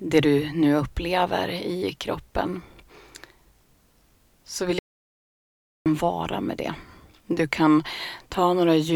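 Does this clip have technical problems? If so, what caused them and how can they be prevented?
Yes. An audio dropout to silence runs from 4.79 to 5.86 s. The sound cuts off mid-flow and 1.07 s of silence follows, with no room tone, because the input was likely lost while recording continued. Secure connections, check mute states, and monitor input during capture.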